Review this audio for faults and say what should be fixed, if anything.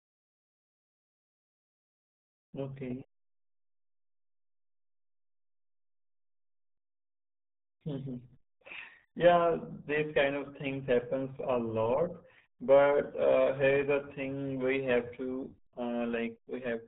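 RealAudio 14.4 codec damage runs through the whole clip. The speech is muffled and gargly, and nothing passes above 3.9 kHz. That missing top end, together with the heavy smearing, fits RealAudio 1 at its 8 kbit/s dial-up rate. At that rate the encoder cannot describe the voice in detail, so it throws away the upper band and rebuilds the rest from a coarse model that blurs consonants. To prevent this, re-encode from the original source with a modern wideband codec at a higher bitrate.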